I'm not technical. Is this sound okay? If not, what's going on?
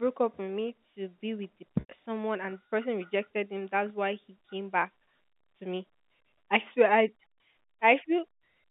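No. Packet loss with pitch repetition happens at about 1.80 to 1.89 s, just after "to be with the" and before "someone and the person". Roughly 90 ms of the call's data never arrived, likely a few lost packets. To fill the hole, the receiving phone replayed the last tiny cycle of the voice over and over, fading it out. You hear a brief held, buzzy sound, then the speech blends back in. The whole clip has the narrow sound of a telephone line.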